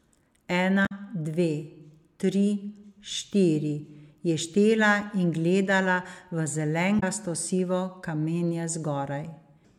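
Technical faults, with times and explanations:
0.82–0.92 s and 6.96–7.03 s: damaged data in a compressed stream. Each event is a short disruption breaking into the speech, about 0.1 s and 0.07 s long. Some bytes in the encoded stream were corrupted at these points. The decoder misread those frames and lost its place. It then hunted for the next valid frame header before normal playback resumed. That brief failure produces a chirp, squawk, click or short hole in place of the speech.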